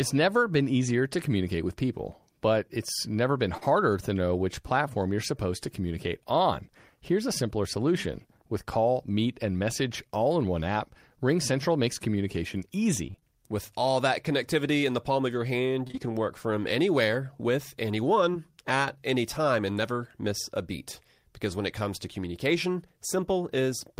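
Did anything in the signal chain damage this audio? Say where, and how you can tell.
Yes. Short concealed packet loss appears at 3.57, 15.87 to 15.99 and 18.33 s. Brief network losses of 20 to 40 ms were patched by the decoder extending the preceding sound, leaving small smears.

Repeated packet loss (robotic sound) occurs from 13.07 to 13.23 s. Four network gaps, the longest 28 ms, left half that stretch concealed, producing a choppy stutter.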